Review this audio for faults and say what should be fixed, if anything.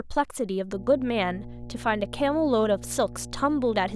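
Mains hum starts at 0.73 s and runs to the end: a steady 60 Hz tone roughly 15 dB below the speech, where a ground loop or nearby transformer couples the power line into the signal. Use a single ground point and balanced cables routed away from power supplies.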